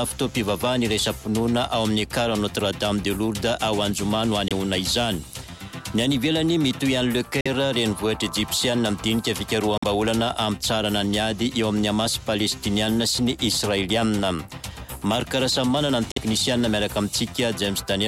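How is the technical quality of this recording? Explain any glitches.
The recording has four short gaps where the sound cuts out completely. They fall at 4.48–4.53 s, 7.41–7.48 s, 9.78–9.84 s and 16.11–16.18 s. The first lasts about 23 ms and the other three about 46 ms each. The edges are abrupt or fade over a few milliseconds, and the sound resumes further along, as though it kept playing underneath. This is likely a Bluetooth dropout: audio packets missed their delivery window and were discarded. The gap lengths fit one lost frame in the first case and two in the others.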